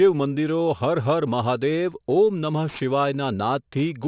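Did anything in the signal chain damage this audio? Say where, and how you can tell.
Yes. Throughout the speech, sibilants turn gritty and metallic, with faint tones that don't track the voice and a spectrum running hard up to 4 kHz. This is aliasing from a sample-rate conversion without an anti-alias filter. The fold point points to a drop to 8 kHz.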